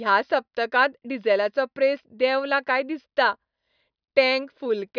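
Speech recording with no audible technical faults.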